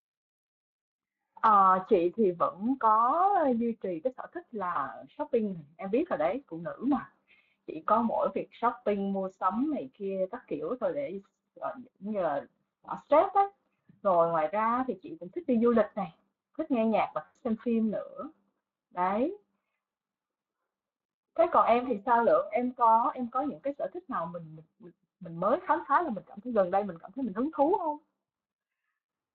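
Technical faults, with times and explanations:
Throughout: Speex codec damage is plainly audible, the speech coming across hoarse and grainy because the low-bitrate CELP coder is starved of excitation detail.
4.73 to 4.82 s: VoIP packet loss concealed by the speech codec, about 20 ms lost; the decoder stretches the last pitch into a brief smear that takes a moment to recover.
17.25 to 17.37 s: VoIP packet loss concealed by the speech codec again, about 100 ms lost; the extrapolated sound fades and the voice stays weak afterwards.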